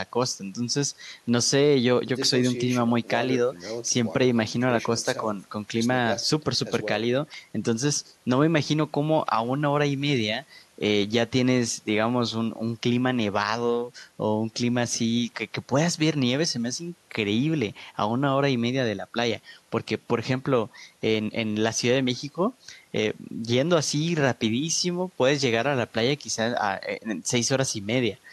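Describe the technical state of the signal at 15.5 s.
The signal at 15.5 s is intact, with no technical fault audible at that point in the speech.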